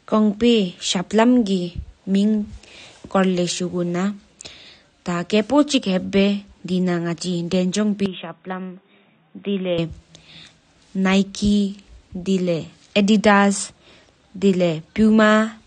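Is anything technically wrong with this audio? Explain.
Yes, two faults. Throughout, likely AAC compression at a low setting, consistent with AAC-LC near 32 kbps: the encoder removes everything above 9.6 kHz and quantises the remaining bands coarsely. The speech sounds dull and smeared, with audible warbling and a fizzy edge on sibilants.

From 8.06 to 9.78 s there is an input switched to a poorer device, likely a change to another microphone or headset profile. There is no gap at the switch. That input passes nothing above 3.8 kHz, so the sound turns boxy and muffled and drops by roughly 10 dB, with a faint new noise floor, before clearing again.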